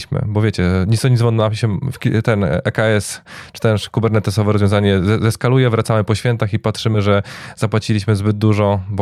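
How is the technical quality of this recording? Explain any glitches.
The recording has one audible glitch, in the speech just after "wracamy po świętach i". Between 6.94 and 6.99 s, compressed frames are skipped: a couple of damaged or missing frames go unplayed, so the audio jumps ahead by roughly 20 ms, which fits 10 ms frames. Unlike a dropout, there is no silent gap.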